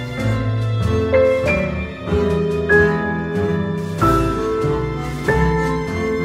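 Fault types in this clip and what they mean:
No faults can be heard anywhere in the audio.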